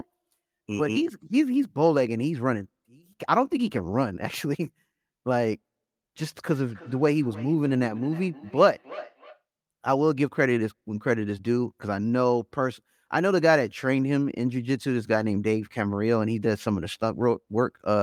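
From about 6.47 s to 9.43 s there's feedback echo between two devices. It sounds like a second phone or laptop in the same room is on the call, playing this speech back out loud, and the mic here picks it up again. The local echo canceller only removes its own device's output, so the repeat slips through. Each bit of speech comes back roughly a third of a second later, at about -19 dB under the speech, thin and a bit ringy.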